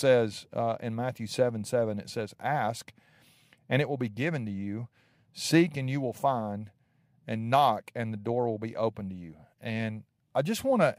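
No technical faults are audible.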